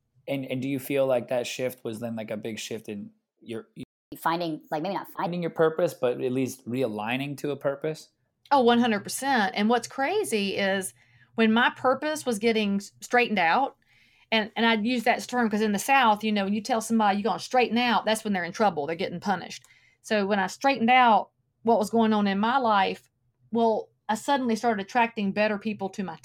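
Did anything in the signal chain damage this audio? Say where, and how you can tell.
Yes, the damage happens at playback. At 3.83 s, right after "big shift in you're", the speech drops to silence mid-flow for about 0.29 s and resumes at 4.12 s. This is a playback stall. The likely cause is that the player's buffer ran dry, or its output thread was blocked, so nothing reached the output for that gap.

From 4.12 s to 5.26 s the speech runs fast and high, then settles before "your purpose but at". This is catch-up at higher speed. The player resamples its backlog at 1.25 times normal rate to recover the time lost in the stall. Because resampling shifts speed and pitch together, the voice rises by roughly four semitones for just over a second and then drops back to normal.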